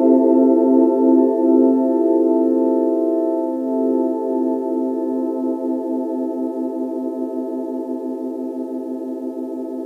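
No audible technical faults.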